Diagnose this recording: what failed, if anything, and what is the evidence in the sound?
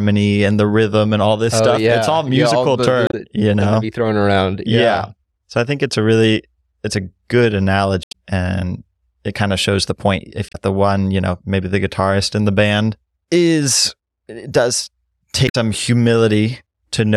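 Codec-stage fault: damaged data in the compressed stream. Brief glitches at 3.07–3.14 s (between "musical yeah all the" and "you know be thrown"), 8.03–8.14 s, 10.49–10.56 s (before "the one you know") and 15.45–15.55 s (after "band is it does"). Corrupted frames are misdecoded until the decoder resynchronises on the next header.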